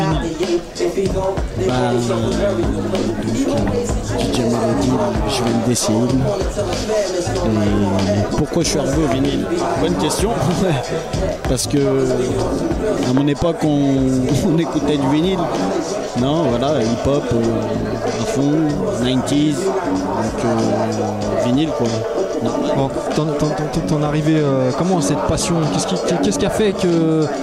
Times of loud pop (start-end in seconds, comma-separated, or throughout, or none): 4.35-4.37, 9.12-9.14, 11.45-11.47, 13.17-13.19